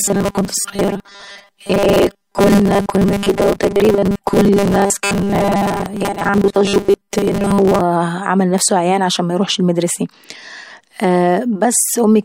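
From the very start to about 7.81 s the speech takes on a robotic sound, most likely from repeated short buffers: a 5 ms chunk gets looped while fresh audio is skipped, stamping a rigid 200 Hz metallic buzz over most of that stretch.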